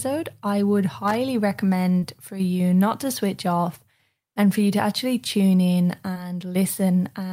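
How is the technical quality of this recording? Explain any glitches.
The speech recording has three brief glitches: one burst of connector crackle and two short concealed packet losses.

From 1.08 to 1.15 s, just after "I would", there is loose connector crackle. A worn or dirty contact repeatedly made and broke the signal path, chopping the audio into an irregular scratchy burst. On a waveform it appears as jagged spikes. On a spectrogram it shows as broadband vertical streaks.

At 1.99 to 2.04 s, just before "for you not to", and again at 6.14 to 6.17 s, just after "to actually tune in", there is short concealed packet loss. Each gap is about 20 ms, which fits one lost packet. The receiver covered it by extending the preceding sound before blending back into the real audio, so each spot sounds like a tiny smear or wobble. On a spectrogram, the harmonics or noise briefly flatten into a repeated, slightly blurred patch.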